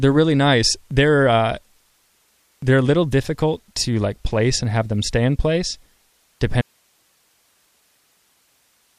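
At 6.62 s the speech cuts out abruptly and never returns, an audio dropout to a faint residue. What's left through to the end is just hiss, roughly 45 dB below the speech. Most likely the source was lost while the path after the break stayed live.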